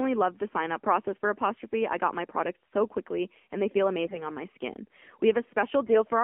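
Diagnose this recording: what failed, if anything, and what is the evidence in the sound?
Codec stage: the AMR narrowband mobile codec runs throughout. The speech sits in a 250 Hz to 3.4 kHz band and sounds buzzy, which fits a low mode near 7.4 kbps.

Network stage: AMR bit errors occur at 4.04 to 4.27 s and 5.84 to 6.02 s. Pitch and level hold but turn gargly, as a few percent of bits arrive flipped.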